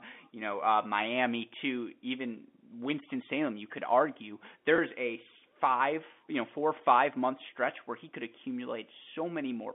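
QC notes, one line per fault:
4.76–4.78 s, packet loss with pitch repetition: Just after "you could argue", about 20 ms of audio failed to arrive, consistent with a single dropped packet. The receiver covered the gap by looping the last pitch period and tapering it off. Because the gap is so short, the loop never fades to silence. It comes across as a brief buzzy hold on the tone before the sound resumes through the narrow 200 Hz to 3.5 kHz telephone band.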